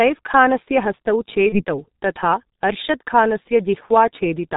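From start to finish the speech sounds muffled and hoarse, with consonants smeared together and nothing bright above the telephone band. That is the G.723.1 codec at about 6.3 kbit/s, damaging the signal heavily. The codec discards everything above 4 kHz and rebuilds the voice from a coarse model refreshed only every 30 ms. Fast articulation falls between those updates, so it blurs, and the low bit budget adds the rough, hoarse grain.

At 1.49 s the speech briefly turns into a stretched, smeared sound that sags in level. It stays weak and distorted until about 1.64 s. This is VoIP packet loss concealed by the speech codec. The missing stretch fits a single lost 30 ms frame. The decoder filled that gap by extending its last pitch and filter settings with falling gain. Each following frame builds on that guessed state, so the damage persists well past the gap itself.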